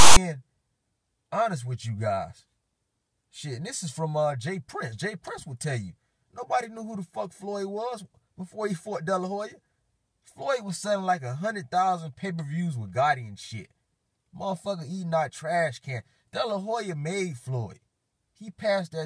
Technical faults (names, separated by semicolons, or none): file tags played as audio